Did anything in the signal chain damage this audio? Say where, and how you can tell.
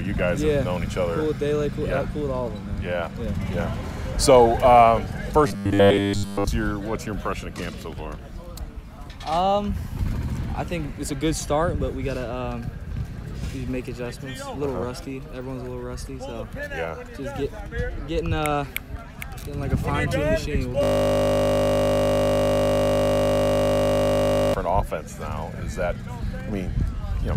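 Yes. Between 5.47 and 6.47 s the driver or buffer stage was likely starved. It filled gaps by replaying short stretches, which fits a 10 ms buffer, so most of that second is repeats. The sound takes on a rigid, metallic 100 Hz buzz.

From 20.83 to 24.54 s the system hang loop appears: the computer or driver froze while the playback hardware kept cycling its ring buffer. A single 20 ms piece repeats exactly, 185 times, producing a steady 50 Hz buzz instead of the real audio.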